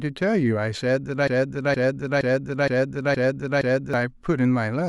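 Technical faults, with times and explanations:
1.28–3.94 s, broken-record loop: a 0.47 s fragment of the speech plays six times back to back, so the same sliver of sound stutters in an exact cycle and the speech that belonged in that stretch is lost. The likely cause is a stalled player or stream resending the last piece it held. On a waveform the span shows identical envelopes repeating every 0.47 s. On a spectrogram the same formant pattern tiles across the gap.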